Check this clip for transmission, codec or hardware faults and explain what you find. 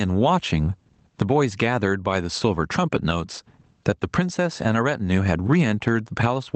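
One fault runs through the whole clip: gain pumping, from start to end. The likely cause is input gain set far too high, with a fast limiter repeatedly clamping it. The gain drops by around 20 dB under each loud syllable, leaving the speech flattened and squashed. The call path's band-limiting, which points to Opus at a wideband setting with nothing above about 8 kHz, sits underneath this pumping.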